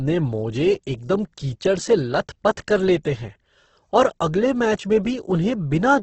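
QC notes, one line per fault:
Throughout, Opus compression: the speech sounds grainy and rough, with a noisy, gritty texture on voiced sounds rather than swirling, and nothing reaches above 8.2 kHz, so the top end is dull. This is likely a heavily squeezed Opus encode in its music mode, which fits a bitrate around 12 kbps. Short of bits, the encoder keeps each band's energy but fills the detail with folded or noise-like content, and it trims the bandwidth.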